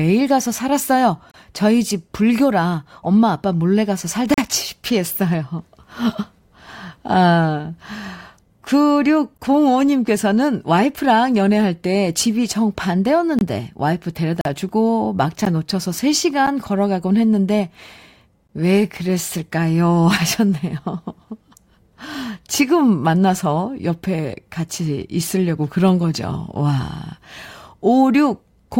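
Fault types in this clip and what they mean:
Gap between stream segments: consecutive 1-second segments are timestamped slightly apart, and the player fills each space with silence. Eight hard-edged holes of 10 to 41 ms cut the speech at whole-second boundaries. Unlike a dropout, no audio is lost, only delayed.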